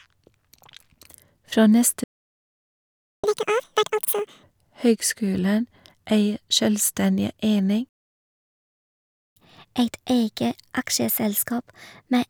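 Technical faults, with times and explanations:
2.04–3.24 s, playback stall: The speech cuts out mid-flow and the output goes fully silent for about 1.2 s before resuming. The likely cause is that the player ran short of buffered data, or its audio thread was blocked, so it had nothing to send to the output.
3.24–4.43 s, catch-up at higher speed: When the speech returns it runs at double speed, with pitch raised by roughly ten semitones, giving a chipmunk-like rush. The player is resampling its backlog to recover the time lost in the stall, then drops back to normal rate.
7.89–9.36 s, playback stall: A second dropout to silence, this one lasting about 1.47 s, again interrupting the speech mid-flow. As before, the likely cause is a starved buffer or a blocked playback thread leaving the output with nothing to play.
9.36 s to the end, catch-up at higher speed: This time the recovery is gentler, at 1.15 times normal speed with pitch up about two semitones. 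The speech sounds slightly hurried and bright. The backlog is still being played down by resampling when the clip ends.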